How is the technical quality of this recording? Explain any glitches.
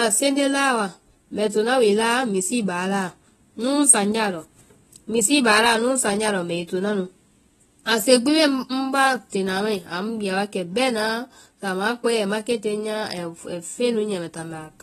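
The recording has plainly audible compression damage from start to finish. Throughout the speech, nothing sounds above 13.8 kHz, and sibilants smear into a fizzy warble. This is likely AAC compression, which fits AAC-LC around 24 kbps: coarse per-frame quantisation strips the top band and thins what remains. A plain low-pass filter would only dull the sound; the shimmering texture marks codec damage.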